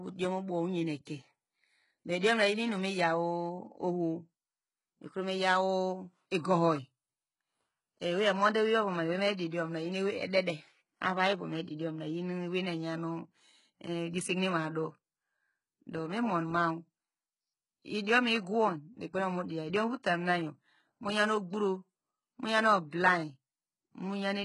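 Throughout this speech clip the treble sounds bright but false: s sounds come out gritty and lispy with a metallic sheen, and nothing is present above 11.1 kHz. The likely cause is heavy HE-AAC compression at a very low rate, with the coarseness pointing to something around 12 kbps. At such a rate only the lower spectrum is truly coded, and the upper bands are synthesised by copying lower content upward under a rough envelope, so the rebuilt harmonics no longer match the originals across the join. A brief pre-echo also sits at 9.37 s: a short hiss, about 17 ms long, arrives just ahead of a sharp onset, softening its edge. The transform spreads its quantisation noise across the whole block, so the noise meant to be masked by the loud attack also fills the quiet instant before it, where nothing hides it.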